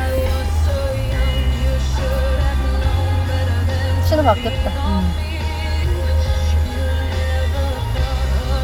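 Nothing in this recording of sounds stood out as a technical problem on listening.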